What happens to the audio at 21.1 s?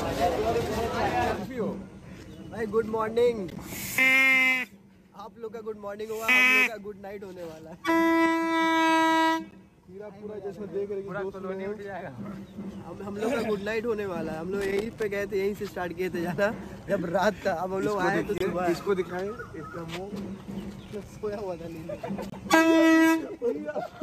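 At 21.1 s the audio is at the tail end of a burst of loose connector crackle that runs from 20.86 s to 21.10 s, roughly a quarter of a second. A worn or dirty contact in the signal path is making and breaking repeatedly as it shifts, so the signal is chopped into fragments, and any DC on the line turns each break into a pop. The result is a short, irregular scratching crackle over the sound.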